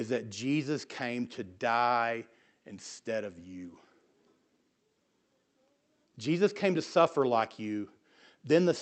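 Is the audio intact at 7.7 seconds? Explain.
Yes, at 7.7 s the speech is intact, with no dropout, glitch or distortion at that moment.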